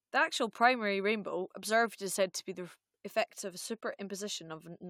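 Nothing goes wrong anywhere in this bit of speech; there's not a single technical fault to point to.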